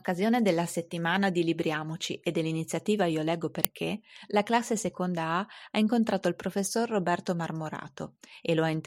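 At 3.65 s there's an uninitialised buffer: a tiny, very loud burst of digital junk, about 1.45 ms long, which fits a 64-sample block played before audio was written into it.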